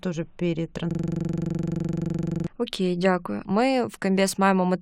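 From 0.91 to 2.47 s the speech locks into a system hang loop: the machine froze while the audio hardware kept replaying one 42.67 ms chunk of its ring buffer, which fits a 2048-sample buffer. It comes out as the same chunk repeated 37 times at about 23.4 Hz.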